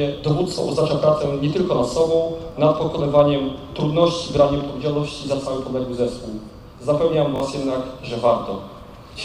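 Repeated buffer at 2.52 s and again from 7.36 to 7.40 s. Fresh audio failed to reach the output in time, so the last block was played again. At 2.52 s one 20 ms slice sounds twice, and at 7.36 s the same slice sounds three times, which fits a 20 ms buffer. Each repeat is butted on with a hard join, so these short repeats come across as a click or brief buzz. Around 20 ms and then 40 ms of audio are lost.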